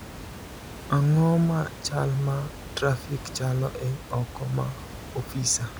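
Nothing stood out on listening to this speech recording; the only thing beyond the speech itself is room noise sitting about 15 dB below it.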